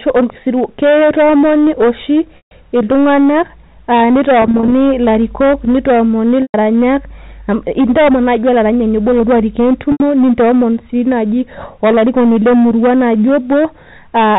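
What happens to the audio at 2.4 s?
At 2.37 s the sound breaks up through packet loss with pitch repetition, lasting until about 2.51 s. Around 140 ms of audio is missing, which fits roughly fourteen 10 ms packets. The receiver loops the last pitch period to cover the hole, so a brief held, buzzy tone is heard. Because the gap outlasts the roughly 50 ms fade, that tone dies into silence, and the audio returns with a short cross-fade. On a spectrogram, the harmonic stripes run perfectly flat and unchanging, dim to nothing, and then resume. The waveform shows identical repeating cycles shrinking in amplitude.

The same moment also carries the hard clipping present across the whole clip. The signal is driven about 11 dB past full scale, so a sizeable share of samples, something like one in seven, hit the ceiling and are sliced flat. The result is a harsh fuzz on the louder stretches around the dropout. 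On the waveform, peaks appear as squared-off plateaus. On a spectrogram, broadband energy smears upward toward the 4 kHz telephone limit wherever the level is high.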